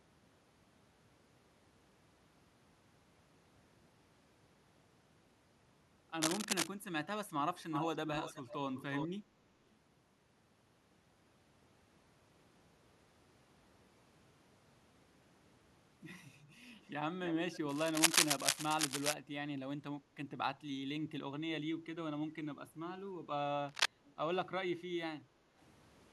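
At 6.22 to 6.68 s there's a burst of scratchy, rustling noise about as loud as the speech, and it comes back from 17.69 to 19.14 s and at 23.69 to 23.86 s a touch louder still. That's cable scratch noise, likely a worn lead or connector being moved so its contact resistance jumps around.

Echo leak turns up at 7.71, 8.06, 8.77, 16.83, 17.26, 17.53 and 24.05 s. It's a delayed copy of the talker coming back, about 358 ms late in the first three spots and about 306 ms later on. It ranges from fairly loud to barely audible, likely the far end's echo canceller letting its loudspeaker through.

From 25.26 to 25.55 s the room sound dips by about 6 dB for roughly 300 ms and then recovers. That's background gated by the echo canceller, which turned the microphone down while the loudspeaker played.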